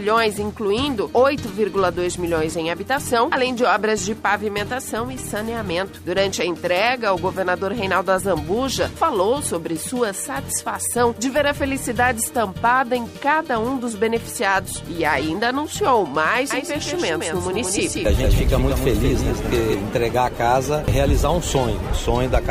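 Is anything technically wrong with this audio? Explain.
Yes. From 16.5 to 19.7 s there is a doubled audio track. A second copy, roughly 5 dB quieter, trails about 200 ms behind, likely from a slower capture path.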